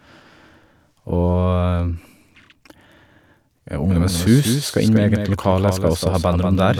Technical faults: doubled audio track

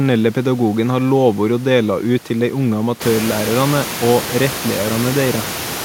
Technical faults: none

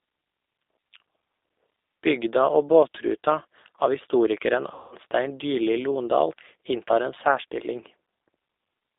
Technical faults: G.729 codec; VoIP packet loss concealed by the speech codec

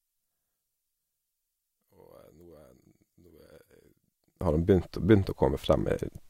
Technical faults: one channel inverted

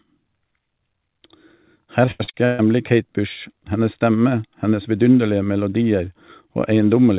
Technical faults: repeated packet loss (robotic sound)

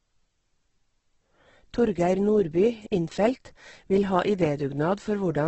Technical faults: Opus compression

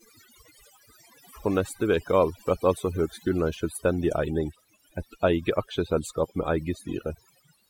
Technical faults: overdone noise removal

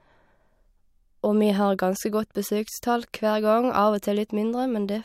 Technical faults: none

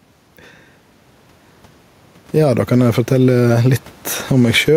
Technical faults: gain pumping

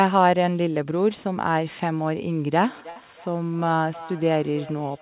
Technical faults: feedback echo between two devices; burst of packet loss

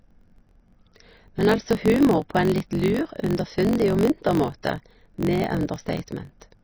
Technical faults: MP3 compression; block size mismatch (truncated); pre-echo

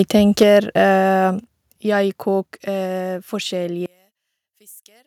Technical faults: microphone overload; microphone volume stepped down

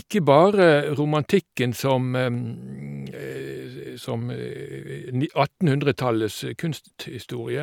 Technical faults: none

